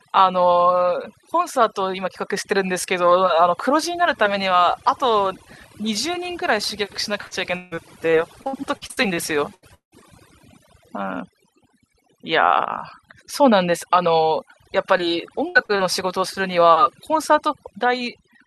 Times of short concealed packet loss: 14.98-15.01, 15.65-15.81

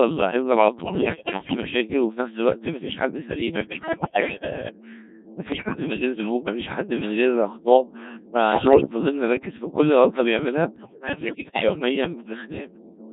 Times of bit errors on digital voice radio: 0.84-1.57, 3.64-4.50, 5.52-5.80, 8.52-8.89, 10.76-11.79

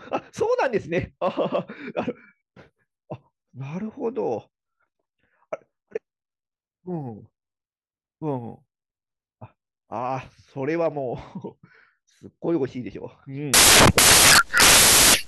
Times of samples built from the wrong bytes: 13.54-15.28

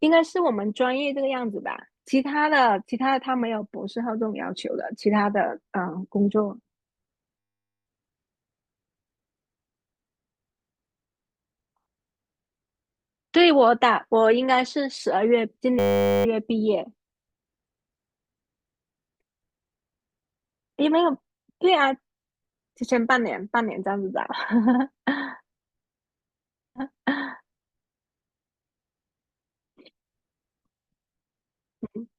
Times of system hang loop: 7.39-7.86, 15.79-16.25

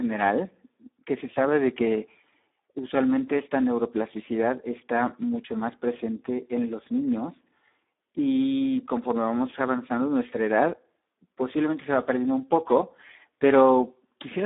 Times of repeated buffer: none

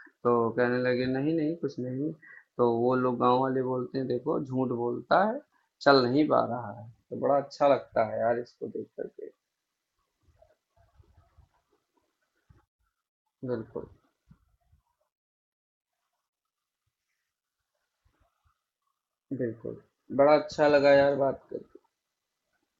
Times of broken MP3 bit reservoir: none

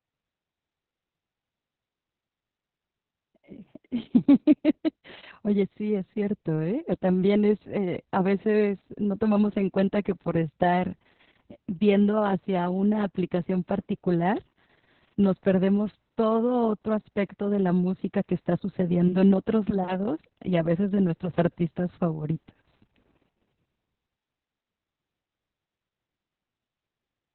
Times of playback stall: none

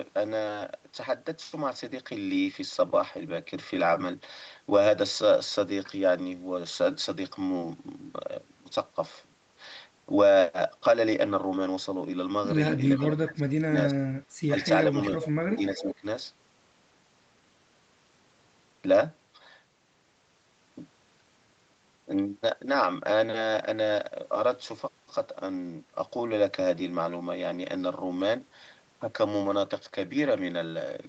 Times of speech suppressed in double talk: 12.98-14.63, 14.91-14.97, 15.50-16.05

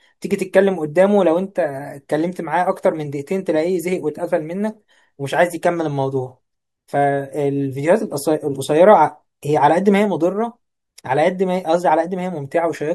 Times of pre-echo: 10.96

